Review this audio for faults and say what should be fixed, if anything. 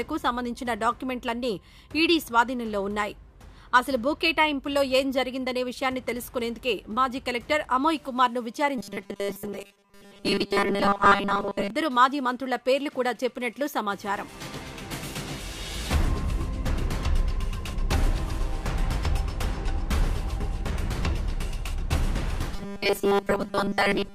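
Robotic sound from repeated short buffers appears from 8.78 to 11.70 s and again from 22.56 s to the end. In both stretches the audio takes on a rigid, metallic 200 Hz buzz, which points to a slice of about 5 ms being replayed over and over while most of the real signal in those stretches is skipped. The likely cause is new audio reaching the player too seldom, so it loops the last short buffer to fill the gaps. To prevent it, give the playback path more buffering headroom so fresh audio always arrives before the current buffer runs out.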